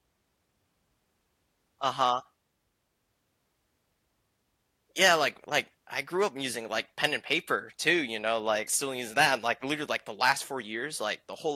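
No technical faults can be heard anywhere in the speech recording, and the signal stays steady and intact throughout.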